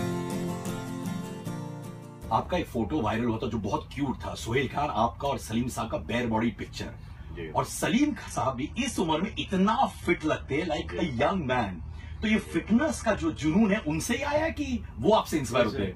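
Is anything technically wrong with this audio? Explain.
Yes. An adaptive stream at a lower bitrate runs from 7.92 to 13.92 s. When the connection slowed, the player switched to a leaner version of the stream. Content above 11.8 kHz vanishes abruptly, which fits a low-bitrate HE-AAC stream. The change is sudden, with no gap.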